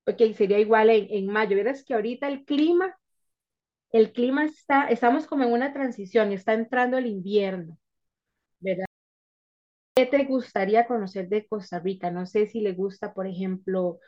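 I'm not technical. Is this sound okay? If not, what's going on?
No. At 8.86 s the speech drops to silence for 1.1 s, an audio dropout to silence, likely a lost input. That part is gone.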